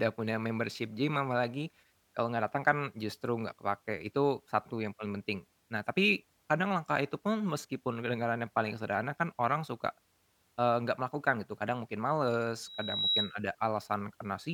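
From 12.63 to 13.36 s there's loudspeaker feedback squeal: the mic catches its own speaker, and a 3.9 kHz tone swells over about 0.4 s, ending up a bit louder than the speech.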